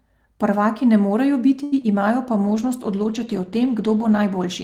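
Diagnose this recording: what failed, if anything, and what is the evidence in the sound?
Short stall from a late packet at 1.63 to 1.74 s, in the network jitter buffer: the buffer ran dry, so the speech is held for 87 ms, then resumes intact, 87 ms later.

Short concealed packet loss at 1.82 to 1.85 s, also network: about 20 ms of audio never arrived, and the decoder bridged the gap by extending the preceding sound, leaving a brief smear.

Call bitrate drop from 2.48 s to the end, at the codec: the encoder fell from 32 to 15 kbps, staying at its lowest for 1.7 s. Coarser coding leaves the speech rougher and duller.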